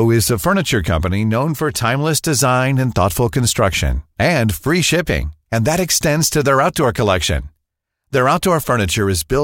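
No technical faults can be heard anywhere in this speech recording. There is nothing here to place on a timeline or trace back to a cause.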